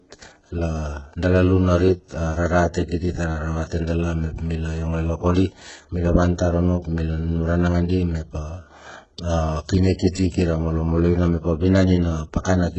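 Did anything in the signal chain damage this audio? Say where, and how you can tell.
Yes. HE-AAC compression is present throughout the speech, at the codec stage. Nothing comes through above 7.9 kHz, and s sounds turn gritty and lispy. The upper band is likely rebuilt from copied lower bands by spectral band replication, consistent with heavy coding around 8 kbps.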